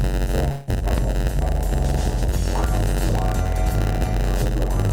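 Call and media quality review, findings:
Steady buzz throughout at 91.9 Hz, audio slow at 0.919× with timbre unchanged. Block size mismatch (padded): short writes zero-filled to a larger read block, gap every block.

Fading buzz or hiss 0.51–0.69 s, then audio resumes with about 160 ms lost. Likely long network dropout: receiver extended the last sound for about 157 ms, no silence reached.

Sharp pop 0.98–1.02 s, about 10 dB above the signal, audio continuing underneath. Likely loud pop: voltage transient from a switch, plug, static or driver glitch.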